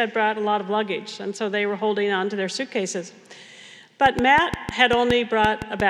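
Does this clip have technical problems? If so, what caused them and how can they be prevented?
Yes. From 4.06 s to 5.81 s a train of clicks sits on top of the sound: about ten sharp, similar pulses at roughly 5.2 per second with uneven spacing, peaking well above the signal and audible in the quiet gaps too. The likely cause is interference from nearby equipment or a faulty connection or power supply. Unlike random crackle, the pulses share one shape and a steady density. Prevention: keep phones and power supplies away from cables and use a stable, properly powered interface.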